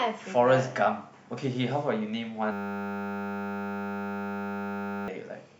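At 2.52 s the speech locks up into a system hang loop that runs until 5.08 s. The machine or its driver froze while the sound hardware kept replaying the same 10 ms slice of its buffer, 256 times over. Because the slice is so short, you don't get a stutter. It turns into a steady buzz at 100 Hz, and about three seconds of real audio simply never makes it out.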